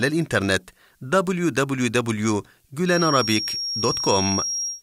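From 2.83 s until the end of the clip, a thin, steady whistle at 5.6 kHz sits behind the speech, only a little quieter than it, roughly 5 dB down, and swelling and fading slowly in level. This is a feedback whistle, likely caused by the path from loudspeaker back into the microphone sitting just at the edge of feedback, so that this one frequency keeps ringing without building up into a full howl.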